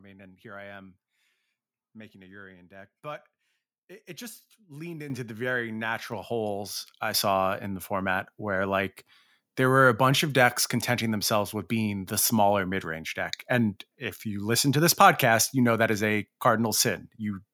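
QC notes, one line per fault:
5.10 s and 6.12 s: microphone volume stepped up. The speech and the background noise jump together, by about 9 dB and then about 5 dB more. The input gain was raised in single steps, so everything the microphone picks up gets abruptly louder at once.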